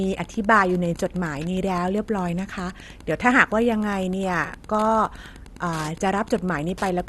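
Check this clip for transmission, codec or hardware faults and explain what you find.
Two faults run through the whole speech clip, both audible from start to finish.

Wi-Fi interference sits under everything as a steady tick about ten times a second, matching a 102.4 ms beacon period, roughly 25 dB below the speech. A nearby Wi-Fi radio is being rectified by the audio circuit, so each beacon burst comes through as a click.

The speech also sounds dull and gurgly, with a granular edge and nothing above 12.2 kHz. The likely cause is MP2 compression starved of bits, which fits a low rate around 64 kbps: upper sub-bands drop out and the remaining ones are coarsely quantised.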